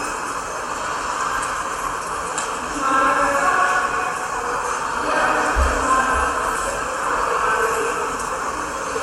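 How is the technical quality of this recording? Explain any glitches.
No glitches or technical faults are audible anywhere in the recording.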